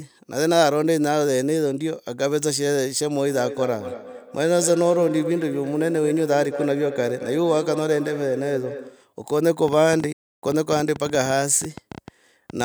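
From 3.28 s to 9.13 s the speech carries a feedback echo between two devices. A second device in the same room is replaying this talker's audio, and the microphone here picks it up again. The local echo canceller only removes its own device's playback, so the copy passes through. Each word returns after roughly a fifth of a second, thinner and ringing, peaking at about 10 dB below the direct speech.

At 9.68 s a train of clicks begins and runs to 12.62 s. There are about thirty short pulses of similar shape, arriving at an uneven pace averaging 8.5 per second. They sit around 5 dB above the speech level and are heard as irregular ticking over the talker and in the gaps. The likely source is interference from nearby equipment or a faulty connection or power supply.

Inside that stretch, from 10.12 s to 10.43 s, a playback stall cuts the output to silence for 295 ms in mid-flow before the sound resumes. 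This is the likely result of the player running out of buffered data or its output thread being blocked until it recovered. The clicks continue on either side of the gap.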